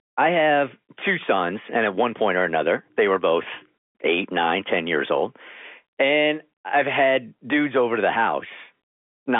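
Nothing goes wrong anywhere in this bit of speech, which just carries the narrow 250 Hz to 3.5 kHz band you'd expect from ordinary G.711 telephone coding at 64 kbps.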